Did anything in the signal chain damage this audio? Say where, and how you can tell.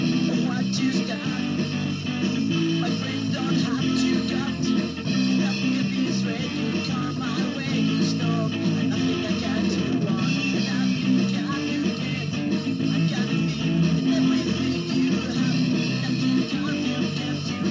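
No, nothing damaged it.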